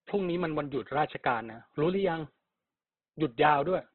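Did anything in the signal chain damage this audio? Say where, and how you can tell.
Yes, at the codec stage, likely Opus compression: throughout the speech the band stops near 4.2 kHz, and the remaining tones sound heavily grainy and rough rather than swirling or hollow like MP3. That fits a narrowband CELT encode near 12 kbps filling bands with noise.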